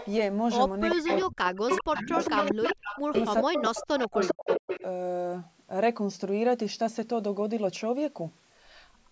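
From 0.0 to 0.11 s, 0.9 to 1.22 s, 1.69 to 3.66 s and 3.98 to 4.84 s, an echo leak lets a copy of the speech return 397 ms late. A loudspeaker echo canceller likely left this residue. It rises from about 15 dB below the speech to roughly equal level. From 0.96 to 2.59 s and 3.03 to 4.83 s, speech suppressed in double talk cuts about a second of the talker in each span by up to about 40 dB. This is likely the canceller muting both voices while they overlap. Unlike the leak, it removes sound rather than adding a delayed copy.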